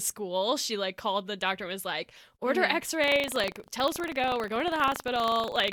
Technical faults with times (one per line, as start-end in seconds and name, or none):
3.00-5.72 buffer tearing